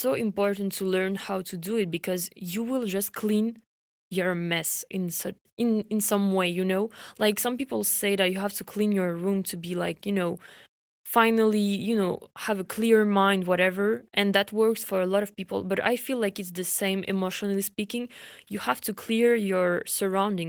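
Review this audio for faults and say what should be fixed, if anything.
I found no faults in this audio, so nothing needs to be fixed.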